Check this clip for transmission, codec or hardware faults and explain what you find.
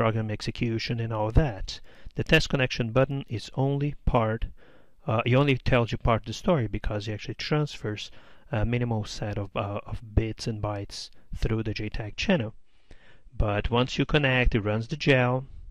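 One fault. From 12.06 s to the end, an adaptive stream at a lower bitrate takes over. A slower connection likely forced a drop, apparently to about 32 kbit/s. Treble vanishes above 9.9 kHz without a gap.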